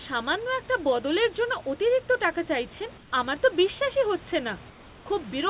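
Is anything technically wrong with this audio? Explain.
Yes. At 2.98 s, after "জন্য অতিরিক্ত টাকা চাইছেন", and at 4.70 s, after "আমার তো বিশ্বাসই হচ্ছে", comfort noise replaces the background for 140 ms and 360 ms. The likely cause is discontinuous transmission: the sender went quiet and the receiver synthesised filler. The room's background noise turns flat and featureless, dropping about 4 dB and about 3 dB.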